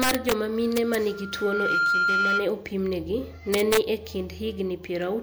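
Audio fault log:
0.02–0.32 s, 0.77–0.95 s and 3.54–3.78 s: integer overflow. In each stretch the speech peaks were pushed past the top of the integer range, by about 5 dB, about 0 dB and about 2 dB respectively. Instead of being held at the limit, each sample beyond it wrapped around to the opposite extreme of the range. Those sudden full-range jumps are heard as sharp cracks on the loud parts, more abrupt than ordinary clipping.
1.08–2.55 s: loudspeaker feedback squeal. A microphone picked up the loudspeaker it feeds, and at 1.4 kHz the loop gain went above one. That tone then reinforced itself on every pass. It swells out of the speech over roughly 0.7 s into a steady squeal, ending up somewhere around 5 dB above the speech, and it lasts until about 2.55 s.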